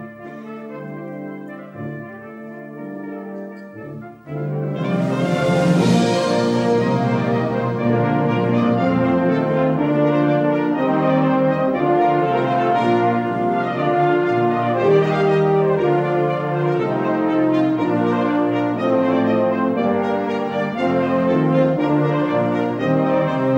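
No technical faults can be heard anywhere in this recording.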